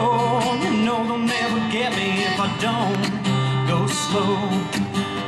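MP2 compression runs through the whole clip: the sound is dull, with a gurgling, granular texture, most likely from MPEG Layer II coding at a low rate, plausibly around 80 kbps, too few bits to keep the upper sub-bands steadily switched on, so they flicker while the remaining bands are coarsely quantised. DAB burbling appears from 0.39 to 0.71 s and again from 2.45 to 2.63 s as short blips of noise in single sub-bands over the audio. Bit errors of a small fraction of a percent slip past the error correction, corrupting samples and scale factors so individual sub-bands jump in level, frame after frame. The second burst is denser, pointing to a higher error rate. An electrical switching spike at 2.95 s is a sharp snap laid over the audio, likely a nearby switch or static discharge arcing briefly and being picked up on the audio line.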